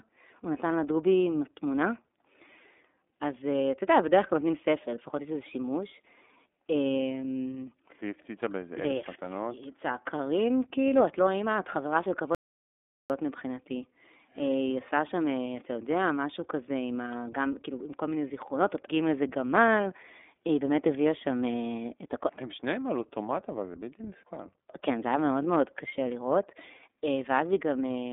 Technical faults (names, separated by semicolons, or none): iLBC codec; audio dropout to silence